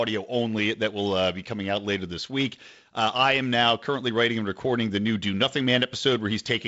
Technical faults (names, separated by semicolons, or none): none